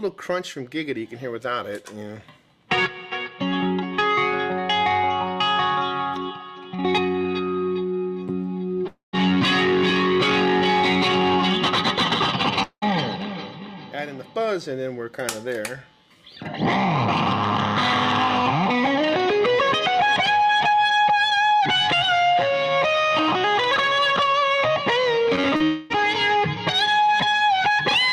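At 8.87 s, about 0.26 s of audio goes missing, likely from a long network dropout. The last sound is stretched into a fading buzz or hiss, then about 0.12 s of silence. A similar gap at 12.63 s loses about 0.2 s, with about 0.07 s of silence before the audio resumes.

Near 25.36 s, 25.41 s and 25.56 s, short concealed packet losses drop 20 to 40 ms each. The receiver patches each hole by extending the preceding sound, which gives brief smears and wobbles.

At 25.64 s another likely long dropout removes about 0.26 s. This time the fill covers the whole gap, so a fading buzz or hiss replaces the missing audio with no silence.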